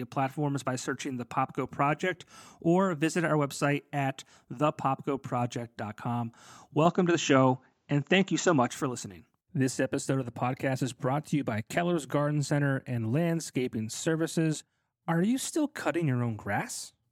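Input switched to a poorer device, from 6.85 to 8.69 s: the speech abruptly loses its top end, with nothing above 7.6 kHz, and takes on a duller, boxier tone. The jump is immediate, with no gap. The level shifts by about 5 dB, and a faint new background noise sits far below the voice. The likely cause is the system briefly moving its input to another, narrower-band microphone before switching back, when the fuller sound returns.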